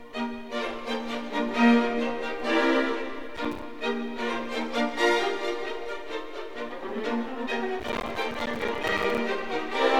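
Processor overload crackle hits at 3.37–3.62 s and 7.80–9.18 s. Missed buffers of roughly 5 ms drop to silence, leaving rapid gaps heard as gritty tearing.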